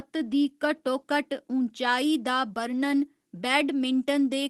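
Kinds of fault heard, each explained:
Lost packet rebuilt from error correction: At about 2.49 to 2.51 s the sound briefly turns rougher and noisier for 20 ms, with no gap or dropout. One packet never arrived, but the next packet carried a lower-quality backup copy of it, Opus in-band forward error correction. The decoder played that coarser copy in place of the original, so the audio carries on unbroken while that single frame loses some clarity and gains grain.
Short concealed packet loss: Just after, from about 2.53 to 2.57 s, there is a brief smear or wobble. About 20 ms of the stream failed to reach the decoder in time. The receiver filled the hole by extending the sound that came just before it, following its pitch where it was voiced and using shaped noise where it was not, then cross-faded back into the real audio. The result is a short synthetic patch rather than silence.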